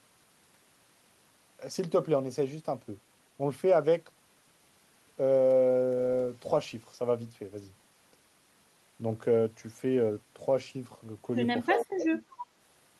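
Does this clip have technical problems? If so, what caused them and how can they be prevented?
Yes. Speech suppressed in double talk, 11.68–12.2 s: level plunges roughly 30 dB, visible as a waveform hollow, likely the echo canceller ducking its own talker along with the echo. Prevent with better double-talk detection.

Echo leak, 11.75–11.83 s: a copy 328 ms late, about 5 dB below, shows as a repeated spectrogram band. Prevent by tuning echo cancellation or using headsets.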